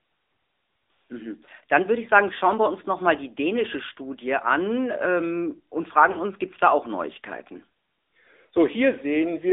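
Speech passed through an AMR narrowband mobile codec, cutting everything outside 300 Hz to 3.7 kHz and adding plainly audible buzzy, synthetic coloring, which fits a mid-rate mode around 10 kbps. Lost AMR speech frames from 6.12 to 6.18 s, between "an ähm und" and "uns gibt es da", make the decoder stretch its last settings with falling gain, so the sound briefly smears and dips for about 40 ms, which fits two missing 20 ms frames.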